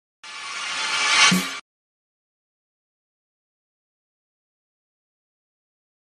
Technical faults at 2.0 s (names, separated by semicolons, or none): none